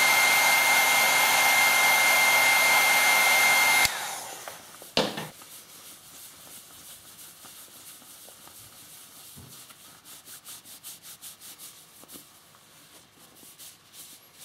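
No technical faults are audible.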